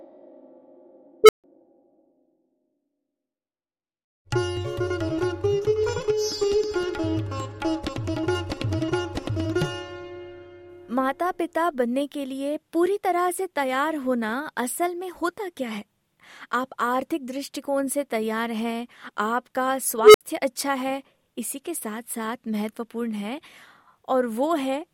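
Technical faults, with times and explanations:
1.24 s and 20.03 s, unstable filter: runaway feedback swells a tone near 400 Hz over 51 and 110 ms into clipping, then overflow leaves 149 and 64 ms of flat-line silence, a bright band ending in a blank gap on the spectrogram.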